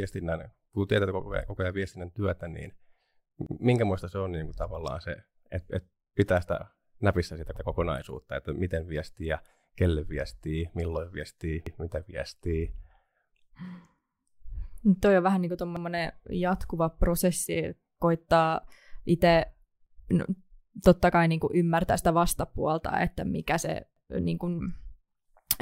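A speech recording with a brief stutter, a tenth of a second of audio played twice, at 3.47, 7.57, 11.67, 15.77 and 23.97 s. This is overlapping chunks: the audio was handled in 4 s blocks, each starting 100 ms before the previous one ended.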